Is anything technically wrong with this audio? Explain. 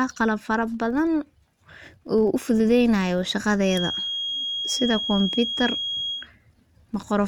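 Yes, two faults are present in this speech clip.

Throughout, a filter restarted on every block loses its state at each block boundary and begins again from silence, leaving a small transient each time. The result is a steady buzz at about 43.1 Hz that rises and falls with the speech level, which fits a 1024-sample block.

From 3.60 to 6.29 s, a feedback whistle appears, likely from the loudspeaker-to-microphone loop sitting just at the edge of feedback. A single tone at 3.3 kHz rings on without building up, heard as a thin whistle that swells and fades slowly, some 5 dB under the speech.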